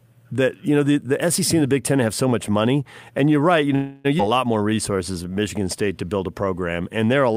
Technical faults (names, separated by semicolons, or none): call audio freeze; skip ahead; jitter buffer slow-down